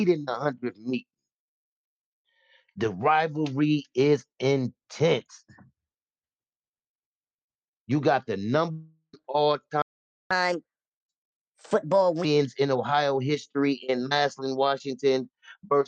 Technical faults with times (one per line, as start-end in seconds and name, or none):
8.71-9.15 long network dropout
9.82-10.31 playback stall
10.31-12.25 catch-up at higher speed